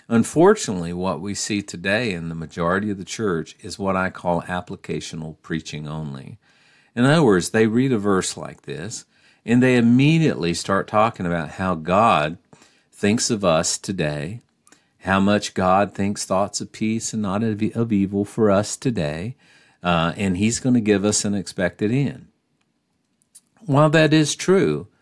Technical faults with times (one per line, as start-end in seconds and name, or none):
none